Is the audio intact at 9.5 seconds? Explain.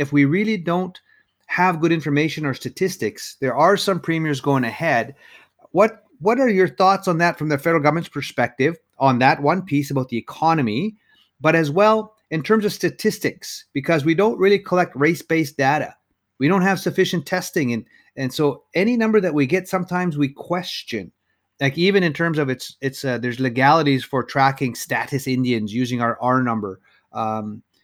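Yes, at 9.5 s the speech plays through intact, with no dropout, click, distortion or other fault at that moment.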